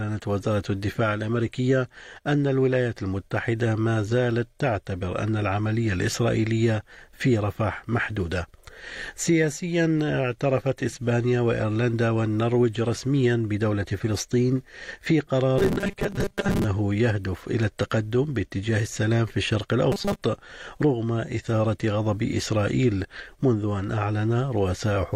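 From 15.58 to 16.64 s and 19.92 to 20.24 s, robotic sound from repeated short buffers: a rigid 200 Hz buzz, unlike gapped dropouts, likely from 5 ms chunks looped to cover about half, then most, of the missing audio.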